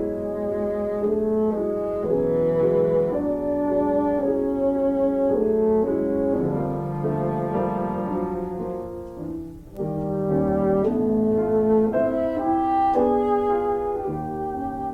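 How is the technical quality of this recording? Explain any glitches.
No glitches can be heard anywhere in this recording.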